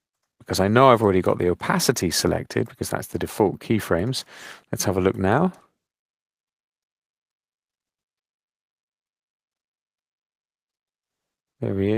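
No technical faults can be heard anywhere in the audio. Nothing in the sound calls for comment.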